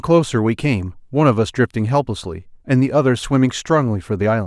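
Speech, with no audible faults.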